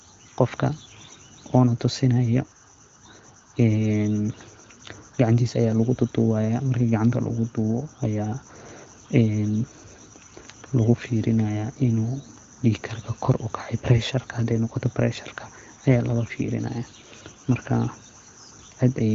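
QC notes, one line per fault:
No faults found; the speech sits in the AMR wideband (HD Voice) band, with nothing above 6.5 kHz and the clarity of a mid-to-high rate around 16 kbit/s.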